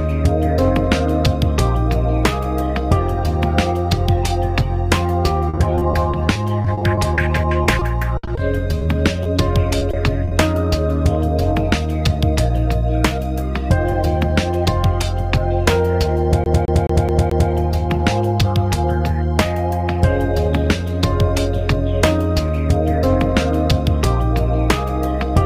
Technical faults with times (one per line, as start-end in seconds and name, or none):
5.49-10.33 repeated packet loss (robotic sound)
13.92-14.66 jitter buffer speed-up
16.44-17.51 CD stuck on one turn